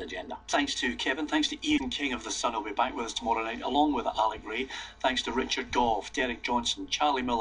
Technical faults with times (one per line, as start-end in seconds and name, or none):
1.76-1.81 broken MP3 bit reservoir